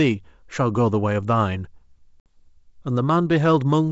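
At 2.20 s, packet loss on an ADPCM call cuts a 60 ms blank band into the spectrogram; the desynchronised decoder then recovers unevenly until 2.42 s.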